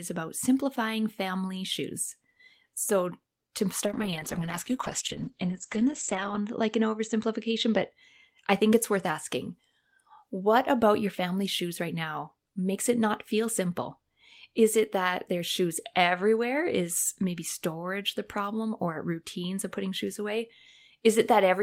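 From 3.86 to 7.95 s a call bitrate drop makes the speech rough and muffled, worst for about 2.5 s. This points to the encoder falling from 32 to 9 kbps. On a spectrogram, energy above 8 kHz vanishes, then returns.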